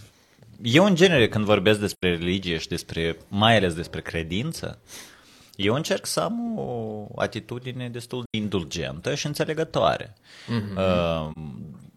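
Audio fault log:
1.91–2.03 s, 8.25–8.35 s and 11.32–11.37 s: AAC frame loss with muting. The decoder zeroed the missing spectrum, leaving gaps of 85.3, 85.3 and 42.7 ms. Those lengths fit two, two and one lost frames. The overlapping windows fade the speech out and back in, so each gap has softened edges, not the abrupt cut of a sample-level dropout. Nothing is repeated or smeared across the gap, as it would be with concealment.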